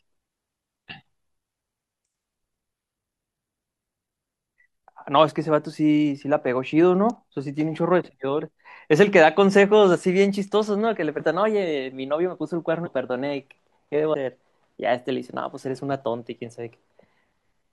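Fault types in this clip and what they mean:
Compressed frames skipped: at 4.54, 11.16, 12.82 and 14.10 s the speech jumps forward, losing roughly 300 ms at the first point and about 150 ms at each of the others. Whole blocks of coded audio never reach the output, so playback resumes further along, by amounts that fit a frame length near 42.7 ms.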